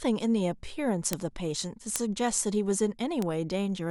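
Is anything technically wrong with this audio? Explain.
Yes. Bit error spikes occur at 1.13 s, 1.96 s and 3.22 s, reaching about -3 dBFS, -3 dBFS and -15 dBFS. A flipped bit throws one or two samples up by a power of two before they return, giving a sharp broadband tick unrelated to the speech, unlike a splice click, which coincides with a signal discontinuity.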